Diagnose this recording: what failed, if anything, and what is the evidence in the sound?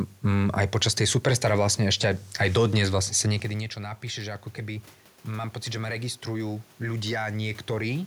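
The fault is automatic gain rising, in the call processing stage. Around 3.0 s the talker moves away and the level at the microphone falls by about 13 dB. From 3.41 s, just after "aj dodnes vlastne sa", the gain control climbs by about 6 dB, slowly, until 8.02 s. Unlike a talker leaning back in, the room noise swells along with the voice. That shared gradual rise marks a processor boosting its gain, not acoustic movement.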